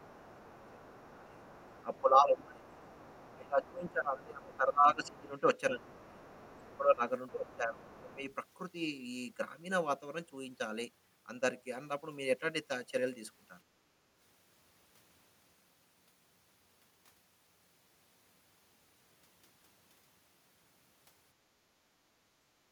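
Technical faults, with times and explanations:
0.00–8.24 s, speech suppressed in double talk: across the opening eight seconds the talker's speech keeps sinking, by roughly 20 dB at its deepest, and in total about five seconds of it is pulled down in patches. The likely cause is an echo canceller that could not tell this voice from the loudspeaker signal while both were active and so turned everything down. What separates it from ordinary level drift is that the dips track the other voice's activity rather than the talker's own phrasing.
0.10–8.34 s, other side's voice leaking through: a second, fainter voice sits underneath in four stretches, at 0.10–2.01 s, 2.79–3.92 s, 4.53–5.21 s and 5.86–8.34 s, roughly 25 dB below the main speech and nearer 30 dB down in the third stretch. This is likely loudspeaker playback reaching the microphone and surviving cancellation. Unlike room reverberation, it does not trail the talker's own words. 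It is a distinct voice running on its own timing.
13.68–13.79 s and 22.32–22.72 s, background gated by the echo canceller: the room tone under the speech drops by about 10 dB, first for about a tenth of a second, then for about 0.4 s running to the end of the clip. Here the canceller clamps the microphone while the loudspeaker plays. The cue is that the ambience itself dips and returns, rather than the speech being thinned or dulled.
21.61–21.86 s, speech suppressed in double talk: a brief, deep cut of roughly 25 dB takes out about 0.2 s of the talker's speech, likely the same overlap suppression as at the start. It is much shorter and sharper than the opening episode, and no leaking voice can be heard alongside it. It differs from the nearby background gating because the speech itself disappears, not just the room sound underneath.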